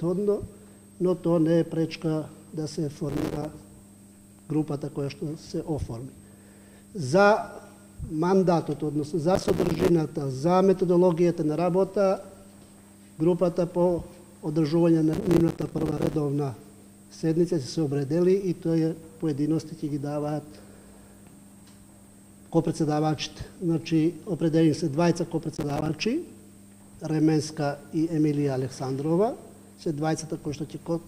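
Processor overload crackle at 3.09–3.45 s, 9.35–9.89 s, 15.13–16.14 s and 25.55–25.89 s: dozens of short buffers, around 5 ms each, miss their deadlines and drop to silence, producing bursts of gritty, tearing crackle.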